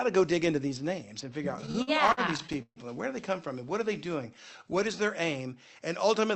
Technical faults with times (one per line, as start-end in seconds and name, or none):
1.51-2.79 repeated stalls (stutter)
3.98-4.97 jitter buffer slow-down